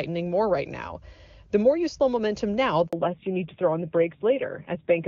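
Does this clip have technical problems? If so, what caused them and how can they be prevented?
Yes. A handover gap occurs at 2.87 to 2.93 s, just after "you slow momentum now": the sound cuts out for about 60 ms while the call moves between networks and no speech frames arrive. Anything spoken in that window is lost. Prevention: keep the phone on one stable network, for example by staying in strong coverage or disabling Wi-Fi calling during the call.

From 2.93 s to the end, the call shows a fallback to narrowband. Before this point the audio is clean HD Voice, consistent with high-rate AMR-WB. After the switch, nothing remains above 4 kHz, and the sound becomes dull and rougher, which fits a low-rate AMR-NB mode around 7.4 kbit/s. Prevention: make sure both ends and the networks along the path support wideband codecs throughout the call.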